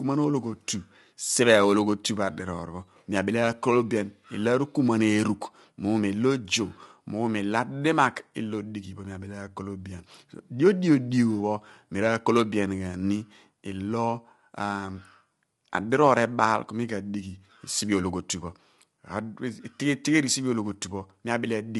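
Low-delay AAC compression runs throughout the clip: the speech sounds plainly rough and grainy, with noise filling the gaps between harmonics and nothing above 11.6 kHz. The likely cause is AAC-ELD, whose short frames resolve pitch harmonics poorly, at a rate fitting 32 kbps.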